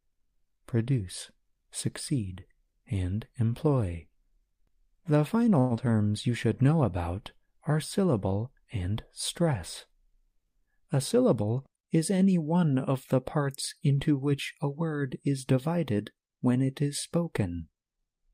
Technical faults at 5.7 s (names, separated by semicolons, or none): long network dropout